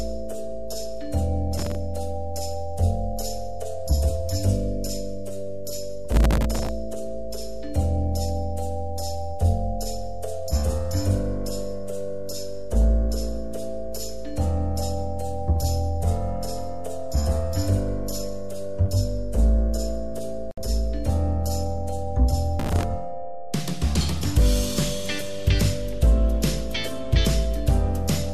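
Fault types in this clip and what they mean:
Processor overload crackle: the processor kept missing very short buffer deadlines and replayed stale audio, giving gritty crackle bursts around 1.6 s, 6.1 to 6.7 s and 22.6 s.
Gap at a join of encoded pieces: separately encoded pieces were joined untrimmed, leaving a 63 ms gap with smeared edges at 20.51 s before the sound carries straight on.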